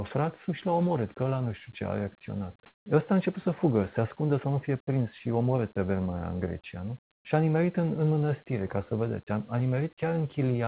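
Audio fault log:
2.66 to 2.86 s and 7.12 to 7.24 s, comfort noise in place of the background: the very quiet background, about 57 dB below the loudest sound, gives way for 200 ms and then 120 ms to a steady, featureless hiss. It jumps about 26 dB louder the first time and drops about 13 dB quieter the second, before the real background returns. The likely cause is discontinuous transmission, with the receiver inventing shaped noise while the sender paused. Unlike a dropout, the gap is filled with smooth noise rather than silence or repeated sound, and it stays within the same band-limited range as the rest of the G.711 call audio, with nothing above 4 kHz.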